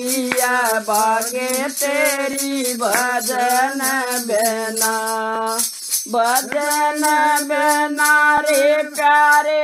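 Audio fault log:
2.33–2.35 s, 5.35–5.38 s, 8.38–8.40 s: overlapping chunks. A short stutter recurs about every 3 s, where roughly 21 ms of sound plays twice. Each 3.0 s chunk begins before the previous one ends, so its opening repeats the tail just heard.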